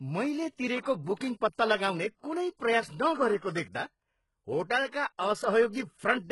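Throughout the speech, the signal has likely passed through HE-AAC compression at a low rate, consistent with about 12 kbps. The treble is rebuilt from copied lower bands rather than coded, so s sounds come out heavily gritty and lispy, with nothing above 11.4 kHz.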